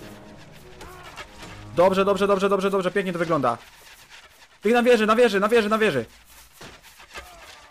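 From 1.79 to 3.50 s, the sound hits hard clipping. The signal is about 5 dB more than the stage can carry. Its peaks are sliced off flat. Those flat tops create new harmonics high in the spectrum. The result is a harsh crackle on the louder moments. From 4.66 to 5.89 s it clips again, now about 6 dB over. The fuzz grows a little rougher, and every loud peak turns gritty.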